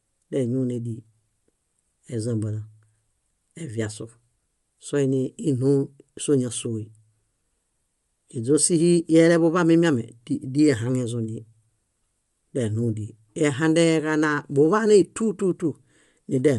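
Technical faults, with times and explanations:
Throughout, likely Bluetooth LC3 compression: speech carries a plainly audible grainy, breathy edge and nothing above 11.6 kHz, as sparse high bands get noise-filled.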